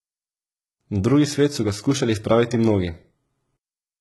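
Speech with heavy HE-AAC compression throughout. Treble is likely rebuilt by band replication. S sounds turn gritty and metallic. Nothing remains above 11.8 kHz.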